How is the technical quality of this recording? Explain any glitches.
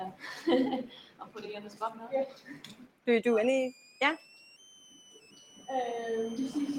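The technical quality is poor. A noise suppressor built for speech has been left running on this audio, and it treats parts of the sound as noise.

The first fault, a noise suppressor applied to music or sounds, runs through the whole clip. The processor expects a voice over a noise floor. It reads sustained, steady content as background and pulls it down. Its gain keeps shifting, with a swing of roughly 10 dB. The result is an uneven, pumping level. Held material thins out and then recovers.

The second fault is sound cut by the noise suppressor, in two places: 0.90 to 1.36 s and 2.29 to 3.07 s. In each, the suppressor decided the sound was noise and cut it harder than its surroundings. The first dip reaches about 12 dB down. The second reaches about 13 dB and lasts longer, close to three quarters of a second. Both stretches sink and sound hollowed out before the level comes back.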